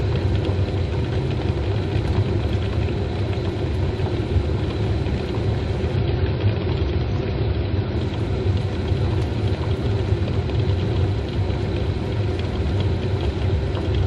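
From 5.96 to 7.96 s the adaptive stream switches to a lower bitrate. The sound points to a drop from about 96 to 32 kbit/s AAC. With no gap, the treble abruptly vanishes above 7.6 kHz and coding artefacts thicken, before full quality snaps back.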